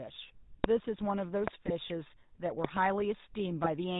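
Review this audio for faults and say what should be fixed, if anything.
The whole clip has a buzzy, gravelly roughness with nothing above 4 kHz. This is the GSM full-rate codec, which fits 13 kbps and rebuilds the speech from coarsely sampled pulse excitation. To prevent it, capture or transfer the speech over a wideband path instead of a GSM call leg.

Sharp loud pops sit on top of the speech at 0.64–0.66 s, 1.48–1.50 s, and as a double pop at 2.65–2.79 s. They peak at roughly 25, 20 and 15 dB above the speech. A likely cause is voltage steps from plugs, switches or static. To prevent them, secure the connectors, ground the equipment and avoid switching during recording.

The speech breaks into squawks and gargling at 1.60–1.71 s and again at 3.64–3.69 s. These are GSM bit errors: flipped bits corrupted the decoder's filter, pitch and gain values. The first burst fits about five damaged frames and the second about two. 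To prevent this, record from a stronger radio link or over a non-cellular connection.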